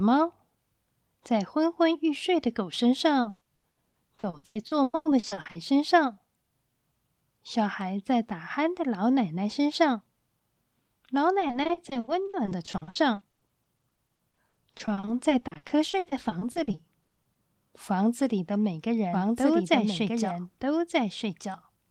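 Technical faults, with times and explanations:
3.21–5.57 s and 11.39–17.37 s, repeated packet loss (robotic sound): the audio keeps breaking into short holes, each patched by stretching the last sound, which gives a choppy, robotic texture. The first stretch is the harsher, with nearly half of it patched and gaps up to 120 ms. The second is longer but finer-grained, with gaps no longer than 60 ms covering over a quarter of it. Unlike a single dropout, the holes come in rapid succession.
19.13 s to the end, doubled audio track: from this point a second, full-band copy of the same audio runs about one and a half seconds behind, at roughly the same loudness as the original, so two overlapping streams are heard. It cuts in abruptly and carries no decay or room colour, which sets it apart from an echo or reverb. The likely cause is the signal being captured twice through a slower second path, or two out-of-step copies left in an edit.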